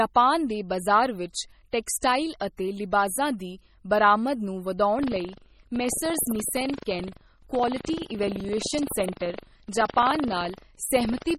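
From the start the speech sounds watery and swirly, with s sounds turning metallic and chirpy and nothing above 16.2 kHz. The damage is heavy, likely from MP3 compression at a low bitrate that fits about 32 kbps: starved of bits, weak frequency lines drop in and out between frames.

From 4.95 s to the end at 11.38 s, a robotic buzz at 23.4 Hz rides on the speech whenever sound is present. This is buffer tearing, which fits a 2048-sample buffer. The writing and reading positions have slipped and cross inside each period, so a small slice, roughly a twentieth, of every buffer replays audio from about a tenth of a second earlier, with abrupt joins on both sides.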